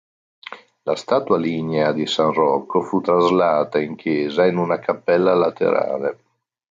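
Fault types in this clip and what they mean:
Gain pumping: all the way through, the gain is pulled down each time the speech gets loud, swinging by around 5 dB, so loud and soft parts sit closer in level and everything sounds squashed. Likely the input gain was set too high, with a fast limiter clamping each peak.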